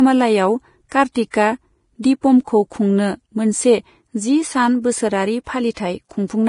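Vorbis compression, likely the cause of the damage heard from start to finish: the speech stops above 10.5 kHz, and the remaining treble is quantised so coarsely that detail turns into hiss and grain, with roughened tones and smeared consonant attacks, which points to a low bitrate near 29 kbps.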